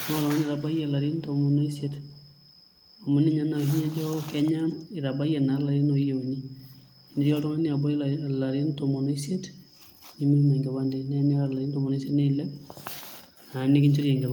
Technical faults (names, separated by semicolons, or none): echo leak